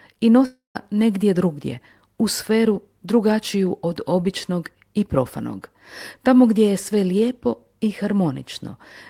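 At 0.45 s the speech breaks off until 0.77 s. The last sound is stretched into a fading buzz. Then about 140 ms of silence follows. Speech resumes at "negdje drugdje u sferu", with 300 ms lost. The likely cause is a long network dropout.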